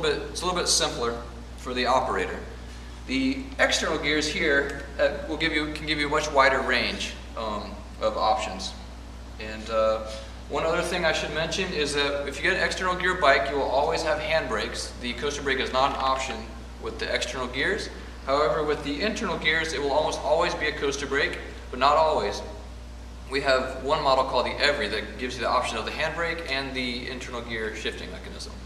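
From start to finish there's mains hum sitting under everything, a steady 60 Hz drone with a few low harmonics riding on it. Something like a ground loop or a nearby transformer is leaking the power line into the signal, and at roughly 15 dB below the audio it's hard to miss.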